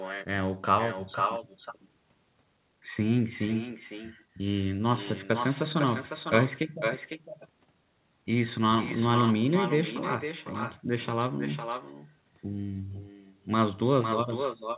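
Throughout the speech, each phrase returns about half a second later as a thinner copy about 7 dB quieter: echo with no canceller removing the far-end loudspeaker's pickup.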